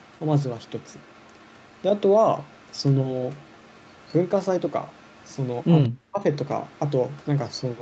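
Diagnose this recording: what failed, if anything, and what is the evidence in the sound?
Echo leak in call processing: at 0–2.84, 3.15–4.29, 4.68–5.68 and 6.65–7.82 s, a faint copy trails 194 ms behind, roughly 35 dB down. On the spectrogram it shows as a shifted ghost, likely uncancelled loudspeaker pickup.

Speech suppressed in double talk, 5.86–6.24 s: the level plunges about 40 dB, leaving a near-flat notch in the waveform. The echo canceller likely ducked both sides at once.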